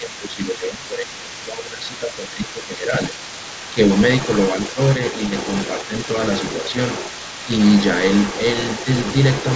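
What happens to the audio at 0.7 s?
At 0.7 s the talker's speech is being turned down, most likely speech suppressed in double talk. It lasts from 0.0 to 2.93 s. Both sides speak at once, so the canceller ducks the talker by around 10 dB. The other side's voice is also leaking through faintly, about 15 dB below the speech. The likely cause is loudspeaker echo the canceller failed to remove, and it persists through the whole clip.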